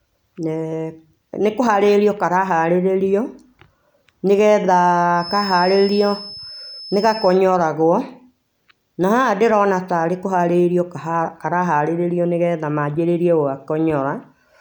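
From 5.13 s to 7.40 s there's a feedback whistle riding behind the speech, a thin, steady tone at 5.2 kHz sitting roughly 15 dB under the voice. It swells and fades slowly in level but never builds up or runs away. That points to a likely cause of a loudspeaker-to-microphone loop hovering right at its feedback threshold, where that one frequency keeps recirculating just enough to sustain itself without tipping into a full howl.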